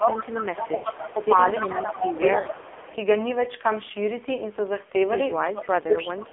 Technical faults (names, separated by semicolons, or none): AMR narrowband mobile codec; lost AMR speech frames; speech suppressed in double talk; echo leak